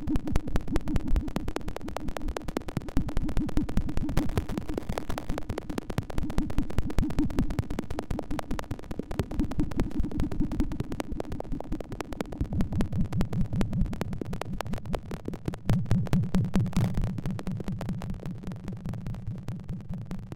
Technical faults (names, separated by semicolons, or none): processor overload crackle